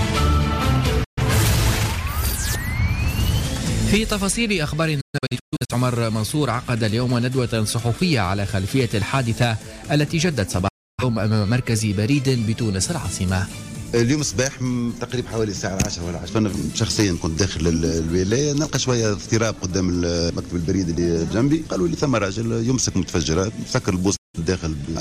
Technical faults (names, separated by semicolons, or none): digital broadcast dropout; audio missing between chunks